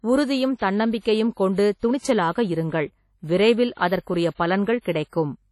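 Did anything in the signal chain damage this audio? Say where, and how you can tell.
Yes. Throughout the speech there is heavy damage at the codec stage, likely WMA compression. The syllables have a ringing, washy edge, and a hiss swells and fades with the level. Nothing survives above 12.8 kHz, which fits a low bitrate around 32 kbps. Long transform blocks smear quantisation noise over tens of milliseconds, and weak partials are zeroed. A spectrogram would show a hard ceiling at 12.8 kHz, gappy, blotchy harmonics, and pre-echo smudges before onsets on the waveform.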